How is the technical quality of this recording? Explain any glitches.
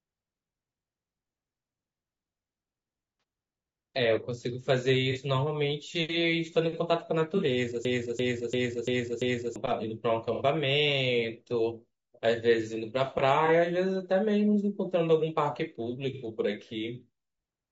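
Technical quality is poor: the speech carries constant codec roughness, six brief dropouts are patched over, and one stretch freezes into a repeating loop.

Throughout, the speech sounds rough and grainy, with a hiss-like fill between harmonics and a thin, synthetic top end. The likely cause is low-delay AAC compression (AAC-ELD) at a low bitrate, around 32 kbps. Its short frames blur pitch harmonics, so the damage is a steady texture that follows the speech rather than isolated events, unlike ordinary band-limiting, which simply dulls the sound without adding grain.

AAC frame loss with concealment occurs at 3.20, 5.12, 7.37, 10.34, 13.46 and 16.13 s. Each gap lasts about 30 ms, except 60 ms at 10.34 s and 90 ms at 16.13 s, which fits one, two and three lost frames. The decoder fills each hole from the last good spectrum, so each sounds like a brief smeared, noisy or phasey patch rather than a click or a hard silence.

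A system hang loop runs from 7.85 to 9.56 s. A 341 ms piece of audio repeats exactly, five times, at about 2.9 Hz, which fits a 16384-sample buffer cycling while the system stalls. It sounds like a skipping record, and about a second and a half of audio is lost. Unlike concealment, it repeats identical material rather than blurring it.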